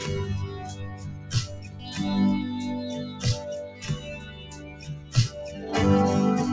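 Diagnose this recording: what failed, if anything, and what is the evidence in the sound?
A speech-tuned noise suppressor was left running in the call processing, so this is a noise suppressor applied to music or sounds. It treats sustained tones, ambience and tails as noise, so the level pumps over a swing of roughly 15 dB across the whole clip, with attacks passing and held sound sinking.

The same suppressor produced sound cut by the noise suppressor from 0.49 to 1.89 s and again from 4.18 to 5.13 s. There the steady and decaying parts drop by up to about 7 dB and their tails end early. The call codec path behind it passes nothing above 8 kHz, consistent with G.722.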